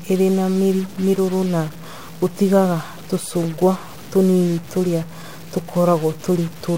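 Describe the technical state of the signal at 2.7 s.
At 2.7 s the speech carries a harsh, buzzy distortion that runs through the whole clip, the mark of a stuck bit, likely one data bit held at a fixed value by a broken line or converter. Roughly half the samples are shifted by a step of about -30 dBFS, so even quiet stretches fill with gritty noise. Clipping would roughen only the loud peaks, while this error persists at every level, pauses included.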